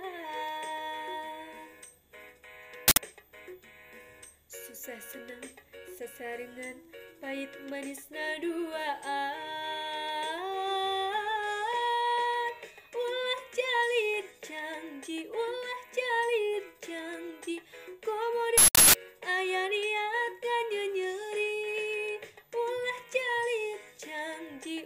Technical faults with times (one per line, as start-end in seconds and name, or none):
2.88-2.97 uninitialised buffer
18.58-18.95 uninitialised buffer